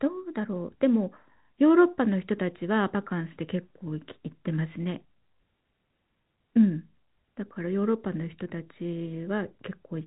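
Nothing stood out on listening to this speech recording, which comes across with the narrow telephone bandwidth one expects of a G.711 line, with nothing heard above about 3.8 kHz.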